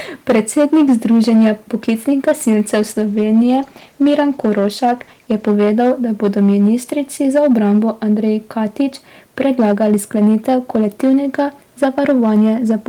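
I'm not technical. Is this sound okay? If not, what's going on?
No. Two problems can be heard. The first is hard clipping, and it runs through the whole recording. The speech was recorded louder than the equipment could handle, so the loudest moments were cut off flat instead of being captured in full. That cutting adds a harsh, crackly fuzz. It only affects a small share of the sound, the peaks, but it comes back on every strong syllable.

The second is a call bitrate drop from 2.82 to 5.53 s, ending just before "da bodo ministrici za". The call's connection appeared to weaken, so the system sent the voice using much less data, staying at its lowest quality for about 2.6 s. During that stretch the speech sounds rougher, watery and dull, because fine detail and the crisp upper sounds were thrown away to save data. Quality returns once the connection recovers.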